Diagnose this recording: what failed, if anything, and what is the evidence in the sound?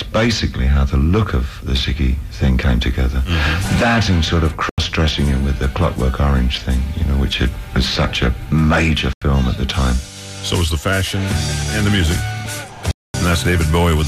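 Driver or buffer stage: blocks of digital silence. Unfilled output blocks dropped to zero. 85 ms holes at 4.69 and 9.13 s fit a 4096-sample buffer. A 230 ms hole starts at 12.91 s.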